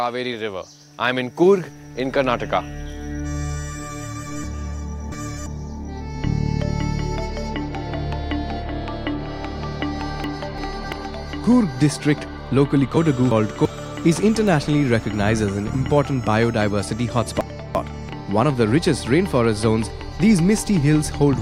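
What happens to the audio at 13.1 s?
At 13.1 s the audio hits chunks out of order, from 12.97 to 13.65 s. A 341 ms chunk arrives one chunk late and plays after its neighbour. Nothing is lost, but the sound jumbles briefly across the three hard joins.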